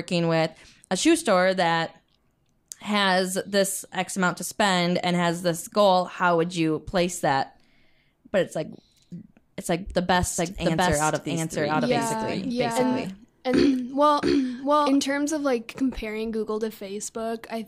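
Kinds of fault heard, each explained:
Doubled audio track: from 10.39 s to 14.97 s a second full-band copy of the speech trails roughly 0.7 s behind at about the same level, with no decay or room colour, cutting in and out abruptly. This is likely a second capture path or a misaligned edit.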